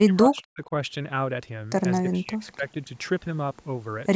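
It's a speech clip where the talker gets chopped down twice: from 0 to 0.71 s, by about 35 dB at worst, and from 1.99 to 2.9 s, by about 20 dB. That's likely speech suppressed in double talk, where the echo canceller mistakes the talker for echo.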